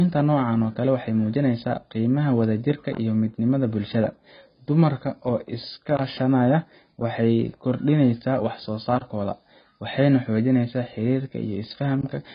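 Throughout, heavy AAC compression damage, likely from a bitrate near 16 kbps, cuts all above 5 kHz. The warbling, smeared sibilants set it apart from plain low-pass filtering.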